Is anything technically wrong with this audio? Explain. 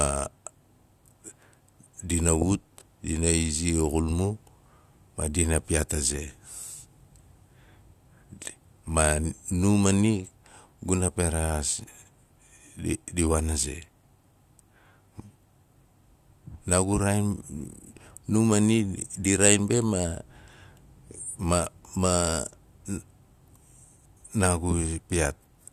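No, nothing in this speech recording stood out as technically wrong on listening.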